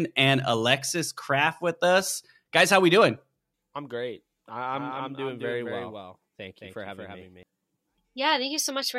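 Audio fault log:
4.73 to 7.43 s, doubled audio track: a second copy of the speech runs about 200 ms behind the original, roughly 5 dB quieter, with no decay or room colour. It cuts in and out abruptly, likely from a slower capture path mixed back in.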